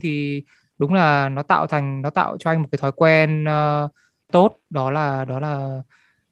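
A lost packet rebuilt from error correction occurs between 1.15 and 1.17 s, after "thì đúng" and before "nó tạo thành nó". It fits one missing 20 ms Opus frame. The next packet carried a low-bitrate backup of it, which the decoder played in its place, so there is no gap. Those 20 ms come out coarser and grainier than the surrounding speech, which passes through the call path with the usual coding noise and a top end that stops near 12 kHz.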